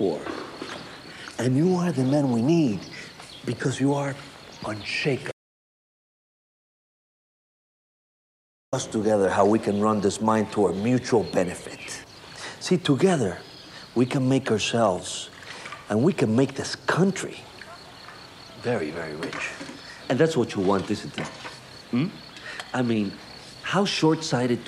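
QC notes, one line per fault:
5.32–8.73 s, audio dropout to silence: the sound cuts off abruptly mid-flow and the signal falls to silence for about 3.41 s, with no room tone or noise floor underneath, before the audio returns just as suddenly. A gap this clean points to the input being lost while recording carried on writing empty samples, likely a momentary disconnect, failed link or accidental mute. Whatever occurred during that stretch is absent from the file.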